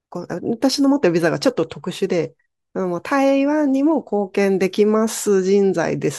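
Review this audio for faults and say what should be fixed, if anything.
Nothing in this speech recording needs fixing; no faults are audible anywhere in it.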